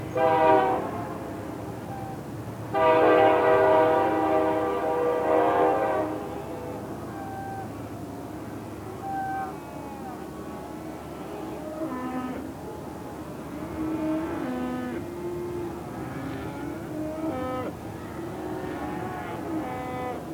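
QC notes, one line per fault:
throughout, video or display buzz: a display or its video cabling is coupling interference into the audio path, injecting energy locked to the picture's 75 Hz field rate. The result is a steady buzz at 75 Hz with a gritty hash riding above it, sitting roughly 20 dB under the wanted sound for the full clip. Because it follows the screen's refresh, it stays fixed in pitch and level no matter what the sound itself is doing.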